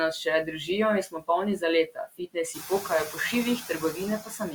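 From the start, noise suppressor artifacts run through the whole clip. The suppressor is estimating the steady background and pulling down whichever bands it judges to be noise, frame by frame, so the noise sinks between the words and rises under them. On a spectrogram the background looks patchy and blotchy rather than an even grey wash, with isolated time-frequency specks flickering on and off.

Speech cut by the noise suppressor occurs five times. Right after "nas še držijo in", from 1.06 to 1.29 s, part of the sound drops by up to about 17 dB, affecting about 0.15 s in all. From 1.87 to 2.37 s the loss is the longest, about a third of a second in all and up to about 18 dB deep. Then 2.54 to 2.71 s, 3.61 to 3.98 s and 4.24 to 4.54 s each lose shorter stretches, about 11 to 12 dB at worst. The room noise rises by about 15 dB near 2.5 s to sit only about 11 dB under the speech. Here the suppressor has mistaken soft speech energy for background and attenuated it along with the noise, so the affected speech sounds swallowed or faint. 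In the waveform the envelope dips abruptly inside what should be continuous speech; on a spectrogram parts of the speech go dark in those spans while the surrounding speech stays intact.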